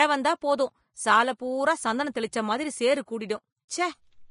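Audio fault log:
throughout: Vorbis compression, likely, given grainy, hissy treble ending at 10.5 kHz. Detail turns to noise rather than simply vanishing as with a plain low-pass. Fits about 30 kbps.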